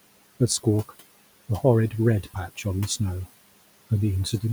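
Right from the start there are noise suppressor artifacts running through the whole thing. The suppressor is pulling the steady room noise down by about 20 dB, and it decides frame by frame which bands count as noise. So the background dips away in the gaps and comes back up under the speech. The room noise itself sits about 19 dB below the speech.

Then between 2.23 and 2.65 s you get speech cut by the noise suppressor. In that stretch it mistakes some of the quieter speech for background and drags it down with the noise, by about 14 dB at the deepest point. Not the whole window is hit, only something like 150 ms of it in total. Those bits sound swallowed, like softer sounds or endings just fade out under the suppression instead of landing cleanly.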